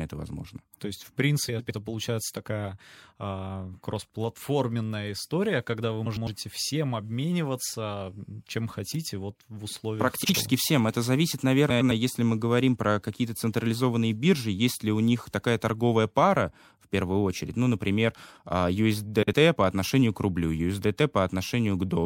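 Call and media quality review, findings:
Frames out of order: adjacent frame blocks swapped before decode at 1.48–1.71, 6.06–6.28, 11.70–11.92 s (about 104.5 ms halves, fits four-frame runs) and 10.24–10.35, 19.22–19.34 s (about 52.2 ms halves, fits two-frame runs). Halves play exchanged as garbled flutter; no time lost.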